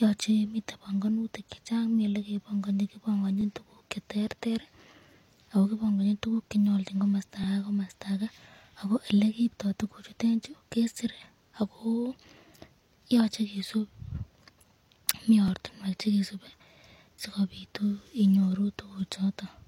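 From the start of the speech, the audio carries the smeared, swirly high end and thin, slightly metallic texture of heavy low-bitrate coding, yet it sits in an MP3 stream at a generous rate. This is most likely low-bitrate audio saved at a high bitrate: a source squeezed to something like 32 kbit/s HE-AAC and then re-encoded at around 256 kbit/s. On a spectrogram, the upper band looks patchy and synthetic, and the second encoding restores none of the detail that was lost.

At 3.41 to 3.44 s, just after "chechang mii elee kebong'oni", a brief stutter marks overlapping chunks. It recurs at 7.44 to 7.46 s and 15.48 to 15.51 s, which fits processing in 4-second blocks where each block begins before the previous one finished. About 23 ms of audio plays twice at each join. The waveform shows a duplicated stretch with a step discontinuity at its edges, and the spectrogram shows a thin vertical line.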